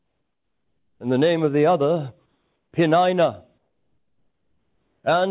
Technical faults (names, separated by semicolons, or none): comfort noise in place of the background